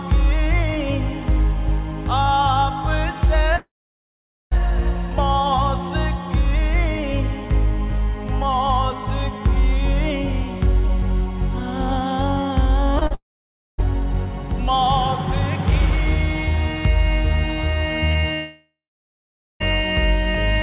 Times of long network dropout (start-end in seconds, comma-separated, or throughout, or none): 3.56-4.53, 13.14-13.80, 18.34-19.62